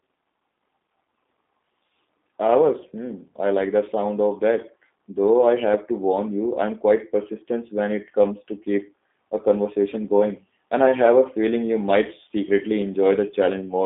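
From start to finish the speech sounds thin, boxed-in and slightly rough and synthetic, with nothing above 3.6 kHz and little below 250 Hz. This is G.729 codec damage: the roughness fits an 8 kbit/s coder that rebuilds speech from a vocal tract filter, pitch predictor and sparse pulses.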